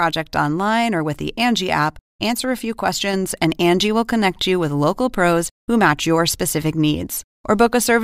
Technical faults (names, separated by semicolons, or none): sudden gain jump